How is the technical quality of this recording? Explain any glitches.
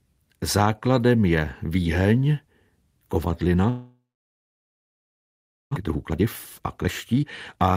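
The recording has two connected glitches. A gap drops part of the speech, and the audio then rushes to catch up.

Long network dropout, 3.69 to 5.77 s: The gap likely comes from a network dropout. A brief fading buzz gives way to about 1.7 s of silence, and roughly 1.2 s of speech never returns.

Jitter buffer speed-up, 5.81 to 7.73 s: The receiver trimmed tiny pitch-period slices to shed the built-up delay of about 0.7 s. Speech runs at 136% speed with unchanged pitch and sounds hurried.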